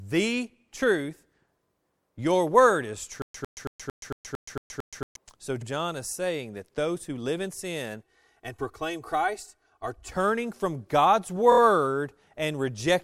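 A speech clip with three kinds of fault. Right after "word is", the stream likely stalled and kept retrying, giving a stutter with silent gaps from 3.22 to 5.16 s: a 0.10 s fragment replays eight times, each followed by about 0.12 s of digital silence, a steady 0.23 s cycle, and the audio that belonged there is lost. Repeated frames appear twice. At 5.61 s, just before "is saying that those", a 52 ms block, which fits two compressed frames, plays once more, adding 52 ms. At 11.51 s, a 26 ms block plays three extra times, adding about 78 ms. Both are heard as a brief stutter. From 8.02 to 10.12 s, after "who live in sin", one channel runs about 3 ms late and the two are summed to mono. This channel delay causes comb filtering, with the first notch near 200 Hz and more notches spaced evenly above it, so the sound turns hollow and phasey.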